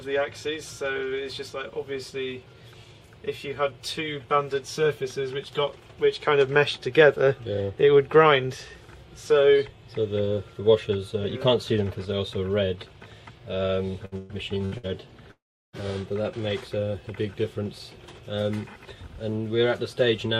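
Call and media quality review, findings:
Repeated packet loss (robotic sound), 14.05–14.86 s: choppy stretch, four gaps up to 115 ms patched by repeating prior audio; spectrogram shows smeared, repeated frames between breaks.

Long network dropout, 15.31–15.76 s: sound continues briefly as fading buzz, then about 350 ms of near-silence; waveform flatlines before audio resumes, likely a jitter buffer underrun.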